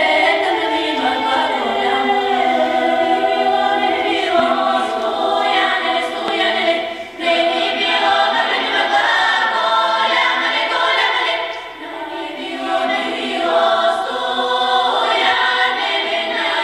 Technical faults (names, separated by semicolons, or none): loud pop